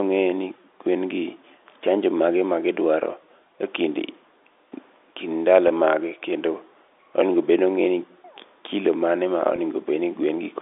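At 5.68 to 5.70 s, and again at 9.56 to 9.58 s just after "kilo mane ma", the speech briefly holds a slightly buzzy, frozen tone before carrying on. This is packet loss with pitch repetition: about 20 ms of audio went missing each time, which fits a single lost packet, and the receiver filled the gap by repeating the last pitch period. Both gaps are short, so the held buzz never fades to silence. The narrow telephone band of the G.711 line stays audible around both events.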